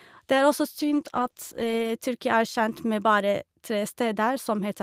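A call bitrate drop from 0.81 to 1.99 s starves the encoder, consistent with roughly 48 down to 13 kbps, so the speech turns coarse, watery and muffled.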